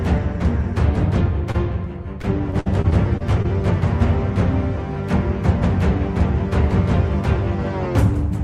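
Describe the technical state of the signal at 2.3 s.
At 2.3 s the signal is inside a stretch of repeated packet loss (robotic sound), running from 2.22 to 3.46 s. Seven short holes fall in that span, the longest 52 ms. About 160 ms goes missing in total. Each hole is filled by stretching the sound just before it. Roughly an eighth of the span is patched this way. The result is choppy, with small pieces dropped.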